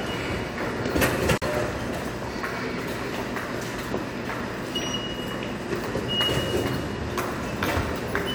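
At 1.38 s the sound drops out and resumes at 1.42 s. This is a gap at a join of encoded pieces, lasting 42.5 ms. The audio was encoded in separate sections and then joined without trimming. The encoder's start-up delay and its padded final frame were both left in at the seam. The result is a brief hole of silence with smeared edges. Afterwards the sound carries on exactly where it left off.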